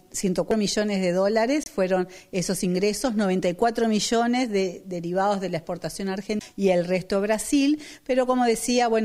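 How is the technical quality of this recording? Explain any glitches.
The recording has three audible glitches: two CD skips and one corrupt frame decoded.

At 0.51 s and again at 6.39 s there is a tick and the sound lurches, carrying on from a different point. These are CD skips. The laser was knocked, or it hit a flaw, and landed on another turn of the disc's spiral. The player went silent for a moment, only a couple of milliseconds at 0.51 s and about 15 ms at 6.39 s, then resumed from the new track position. The result is a jump in the material of one or more disc turns.

From 1.63 to 1.69 s a short stretch of misplaced energy cuts through, peaking at about −20 dBFS. This is a corrupt frame decoded. Flipped bits inside the compressed data were not caught, so the decoder rebuilt that stretch with wrong gains or misread codes and scattered energy into the wrong frequencies. The 60 ms span points to a couple of consecutive frames being damaged.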